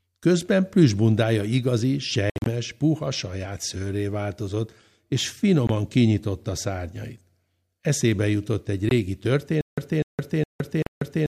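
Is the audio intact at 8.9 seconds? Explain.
No. Right after "jutott egy", from 8.89 to 8.91 s, a Bluetooth dropout likely occurred: a single packet probably missed its slot to the headphones and was discarded. About 20 ms of sound vanishes as a silent gap, and the speech resumes further along, as though it had kept playing.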